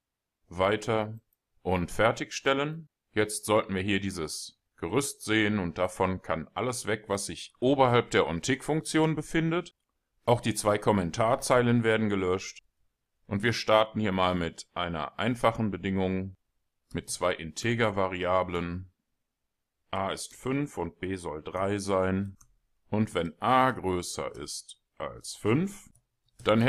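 No technical faults are audible anywhere in this audio.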